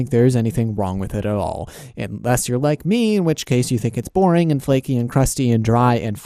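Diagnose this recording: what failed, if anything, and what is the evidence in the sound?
MP2 compression damage runs through the whole of this speech clip, so the failure sits at the codec stage. The sound is dull and lacks top end, and a gurgling, granular roughness rides on the voice. That fits an MPEG Layer II encoder likely starved at a low rate, around 80 kbps. With too few bits to share across its 32 sub-bands, it shuts off the upper bands, lets others flicker in and out, and quantises what remains coarsely.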